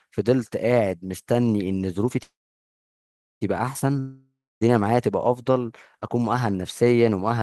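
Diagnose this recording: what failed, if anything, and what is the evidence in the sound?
At 2.23 s the speech turns into a fading buzz, then about 1.1 s of silence, before resuming at 3.43 s exactly where it stopped. This call audio freeze likely comes from network-delayed packets draining the jitter buffer, inserting 1.18 s without losing speech.

From 3.99 s to 4.63 s the last sound smears into a decaying hiss that ends in about 0.28 s of silence. Speech returns further along with roughly 0.62 s gone. This long network dropout likely reflects packets lost in transit, with concealment filling the gap.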